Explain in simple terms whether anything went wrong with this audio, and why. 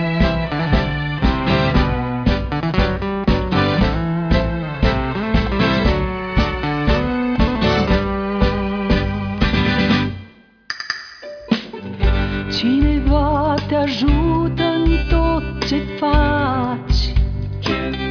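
Nothing went wrong here: no dropouts, glitches, distortion or timing faults turn up anywhere in the recording.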